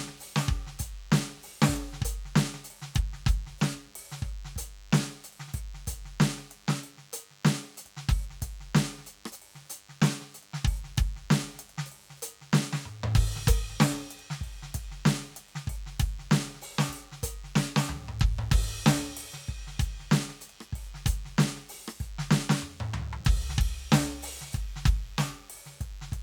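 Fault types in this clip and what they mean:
DECT cordless phone buzz: a nearby DECT handset or base bursts every 10 ms, and rectification leaves a thin 100 Hz harmonic-rich buzz throughout, roughly 30 dB under the music.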